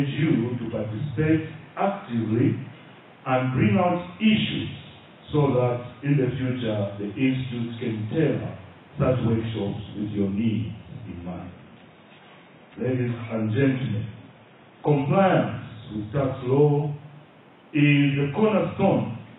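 At 11.06 s the stream appears to drop to a much lower-bitrate version, an adaptive stream at a lower bitrate, which fits a switch from around 96 kbit/s AAC down to something like 16 kbit/s. With so few bits the encoder discards most of the treble and codes what remains coarsely, so the sound is smeared with warbling artefacts. The change is abrupt with no gap, and full quality returns at 15.06 s.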